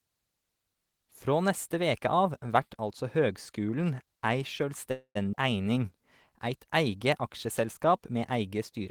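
From 4.91 to 5.17 s, just after "vert altså høgskulen ei", the last sound stretches into a fading buzz that ends in about 80 ms of silence before the speech resumes where it stopped. This is a call audio freeze, likely from delayed packets leaving the jitter buffer empty.

At 5.31 to 5.35 s the speech lurches forward almost seamlessly as a skip ahead. About a tenth of a second of audio was dropped, and the two sides were joined nearly directly.

From 5.41 to 6.31 s, leading into "eit eige aksjeselskap", the speech drags at 90% speed with unchanged pitch. This is a jitter buffer slow-down, which repeated small pieces of audio to add 101 ms of reserve.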